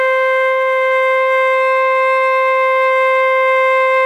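Nothing goes wrong anywhere in this bit of music; there's no technical fault to point to at any moment.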